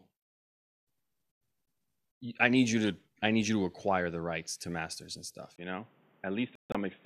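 At 5.56 s, just after "to masters and stuff", the recording likely switched to a poorer input device. A 20 ms gap marks the switch. Then the speech loses everything above 3.8 kHz and turns dull, with new background noise about 35 dB down and no real change in level.

From 6.55 to 6.75 s a digital broadcast dropout occurs. The receiver lost valid frames and muted, so about 168 ms of audio vanishes in two holes spread over 192 ms, the longest lasting 144 ms. That pattern fits several short lost frames.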